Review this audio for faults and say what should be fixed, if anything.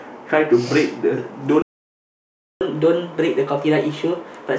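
At 1.62 s the speech cuts out mid-flow and the output stays silent until 2.61 s, a gap of about 0.99 s. This is a playback stall: the player stopped delivering samples to the output, most likely because its buffer ran dry or its audio thread was blocked, and the device played silence until data arrived again. To prevent it, keep a deeper playout buffer and run the audio callback on a high-priority thread that never waits on network or disk I/O.

From 2.61 s to the end of the clip the speech resumes running fast, at 1.15 times normal speed, and the pitch rises by roughly two semitones. This is catch-up at higher speed: after the stall the player resamples its accumulated backlog to recover the lost time, so tempo and pitch rise together and stay raised for the rest of the clip. To prevent it, recover latency gradually with a smaller rate change, or use pitch-preserving time-stretching instead of plain resampling.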